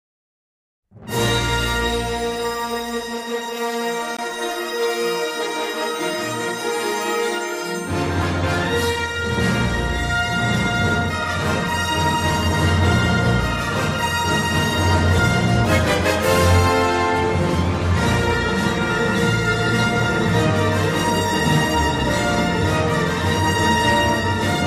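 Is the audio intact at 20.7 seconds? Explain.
Yes, at 20.7 seconds the audio is intact, with no audible fault at that moment.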